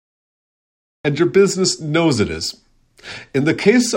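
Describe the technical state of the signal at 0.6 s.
At 0.6 s the signal is digital silence. It belongs to a cut-off start running from 0.0 to 1.05 s. Capture began late, so the speech enters mid-sound at 1.05 s, on "and your business knows", with no natural attack or fade-in.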